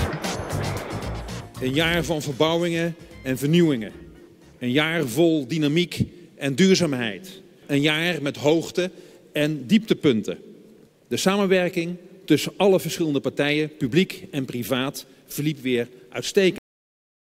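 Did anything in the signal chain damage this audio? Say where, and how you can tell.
Yes, a cut-off end at 16.58 s: the sound stops mid-event without decaying, because the final buffers were never written out or played.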